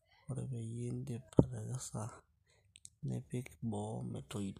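A short speech recording with no technical faults to report. Nothing audible in it points to a problem anywhere in the recording or playback chain.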